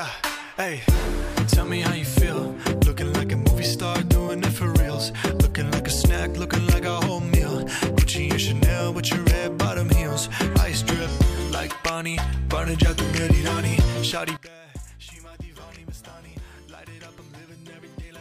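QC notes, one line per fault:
14.37–18.2 s, one channel inverted: the level falls by about 20 dB and the centred content nearly vanishes, leaving a faint residue until the end. One stereo channel has likely flipped polarity, so shared content cancels when summed to mono.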